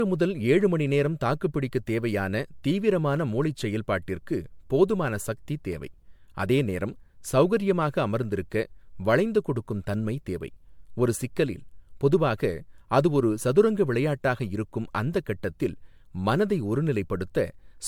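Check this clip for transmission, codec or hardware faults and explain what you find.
Two faults are present: a lossy codec chain damages the whole clip, and a recurring slip repeats through most of it.

Generation loss, throughout: the speech was likely re-encoded with MP3 about five times at rates that fit roughly 105 kbit/s, each pass requantising on a shifted frame grid. The errors accumulate into swirly, hollow, smeared sound with softened consonant attacks, and nothing above 19.9 kHz.

Clock drift buffer slips, from 0.61 s to 17.26 s: two devices' clocks likely disagree by roughly 150 ppm, so the buffer between them creeps until a handful of samples are dropped or repeated. This produces about fifteen short clicks, one every 1.28 s.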